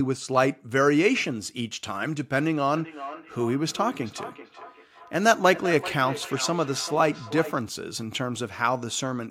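Feedback echo between two devices runs from 2.77 to 7.65 s. The speech comes back at a steady interval of roughly 0.4 seconds, peaking about 12 dB below the direct speech, and each return sounds thinner and more ringing than the original. A second device in the same room on the same call plays back what this microphone sent, and the microphone picks it up again. The echo canceller can only remove what its own device plays, so this loop gets through.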